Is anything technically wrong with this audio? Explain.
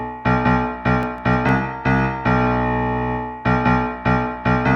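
Yes. From 0.88 to 1.49 s there are CD scratch ticks: five brief clicks, the longest only a millisecond or two, spaced regularly at roughly eight per second. That regular spacing points to a disc blemish passing the laser once per revolution, each pass corrupting more data than error correction could rebuild, so the player interpolated or muted those samples. The audio was also carried over a call codec path, which limits its top end to about 12 kHz.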